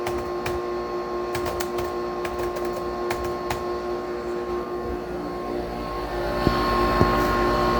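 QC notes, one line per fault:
No technical faults were found.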